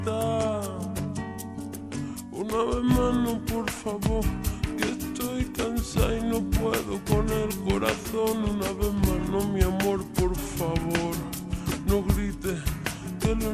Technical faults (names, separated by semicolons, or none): wrong sample rate